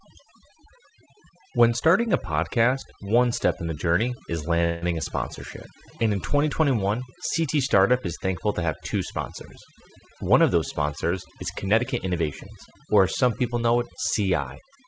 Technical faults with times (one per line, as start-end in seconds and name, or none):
0.00-14.87 overdone noise removal
4.64-4.84 call audio freeze
10.01-12.45 jitter buffer speed-up